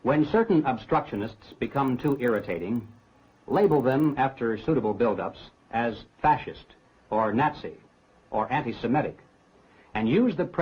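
From 1.04 to 4.12 s, a resampler restarted on every block, converting 24 kHz to 48 kHz in 40 ms pieces without neighbouring samples. Each edge leaves a tick, giving a rough 25 Hz buzz. Unlike dropout clicks, these are evenly spaced and only present with signal.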